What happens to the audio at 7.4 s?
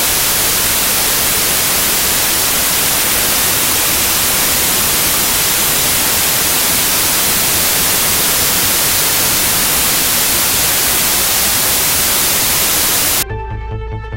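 At 7.4 s the audio is inside a wrong sample width fault spanning 0.0 to 13.23 s. Samples stored as 32-bit are read as packed 24-bit, so bytes straddle sample boundaries. Loud noise buries the sound, slowed to 0.75 speed with lowered pitch, unlike a clean sample-rate slowdown.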